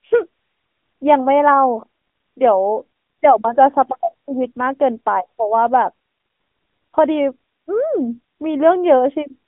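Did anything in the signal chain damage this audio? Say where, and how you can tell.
Yes: AMR narrowband mobile codec damage runs through the whole speech clip, from the codec stage. Nothing above 3.7 kHz survives, the low end stops near 200 Hz, and the buzzy, synthetic vocal-tract modelling fits a mid-rate mode around 10 kbps.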